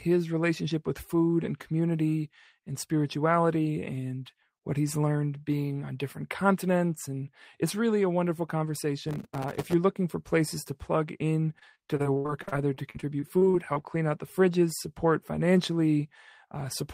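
From 9.09 to 9.73 s there's a burst of processor overload crackle. The machine kept missing its deadlines on very short buffers, which fits something around 1.5 ms, and roughly a hundred of them dropped out as tiny silent holes with hard edges. That reads as a gritty tearing over the speech.

Then from 11.59 to 13.77 s comes repeated packet loss, with the robotic sound you'd expect. Lost chunks kept getting patched by stretching the previous sound, about 461 ms of it in all, with the longest gap 72 ms. The speech turns choppy, with bits missing.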